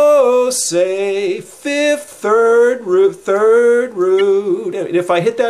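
A corrupt frame decoded at 4.18 to 4.21 s gives a short chirp, squeak, blip or burst of noise, with the error peaking around -15 dBFS, as a couple of damaged compressed frames play with misread gains, misplacing energy across frequencies.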